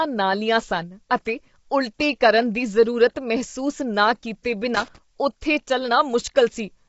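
Low-delay AAC compression runs through the whole speech recording: plainly audible coding damage and nothing above 7.7 kHz, likely from AAC-ELD at a bitrate around 24 kbps. Loose connector crackle appears from 4.75 to 4.98 s, just after "ਮਹਿਸੂਸ ਨਾ ਕੀਤੇ", as an unstable contact rapidly breaks and remakes the signal path.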